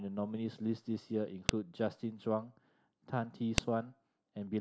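At 1.49 s and again at 3.58 s, the speech is broken by a sharp, loud snap. This is a file header played as audio. Pieces of WAV data were joined with their headers left in. Those header bytes play as a brief burst of samples.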